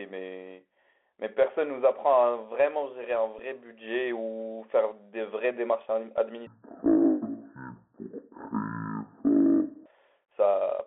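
The whole speech track has gone through the Bluetooth CVSD headset codec, which fits a 64 kbps one-bit-per-sample link. The band sits at roughly 300 Hz to 3.4 kHz, so it's thin and boxy, with scratchy s sounds, grainy hiss underneath and distortion on loud bright bits.

At about 3.39 s there's a Bluetooth headset packet repeat. Roughly 7.5 ms of audio went missing, which points to two lost packets, and the decoder replayed old data to fill the gap. It's short, a brief repeat lasting two packets.

From 6.47 s to 9.86 s there's a section at the wrong speed. It plays at half speed, so the voice drags and sinks close to an octave lower, ten semitones or so. It's likely someone fitted that stretch to the wrong clock.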